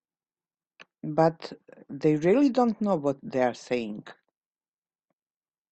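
Nothing stood out on listening to this speech recording.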